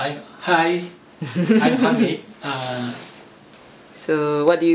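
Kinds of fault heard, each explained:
No kinds of fault are heard in this clip.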